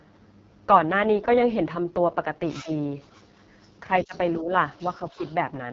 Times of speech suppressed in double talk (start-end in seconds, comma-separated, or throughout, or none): 2.62-2.69, 4.04-4.51, 5.17-5.22